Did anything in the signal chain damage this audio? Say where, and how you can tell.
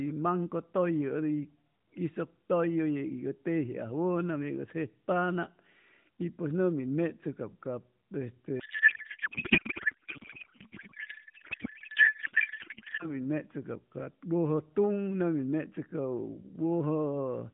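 Yes, at the codec. From 8.60 to 13.17 s, speech becomes garbled warble. That's a codec payload misread. It fits octet-aligned AMR unpacked as bandwidth-efficient.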